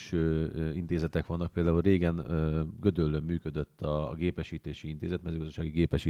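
Nothing here counts as a fault; the speech simply comes through Opus voice compression running at 24 kbps in hybrid mode with the full band kept, and the coding leaves only a light touch on the sound.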